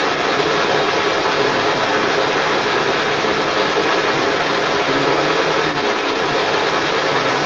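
Other side's voice leaking through runs from 0 to 7.46 s: a second voice comes through alongside the talker throughout, roughly 10 dB stronger than the talker. The likely cause is an echo canceller that failed to strip the far end's loudspeaker playback from the microphone.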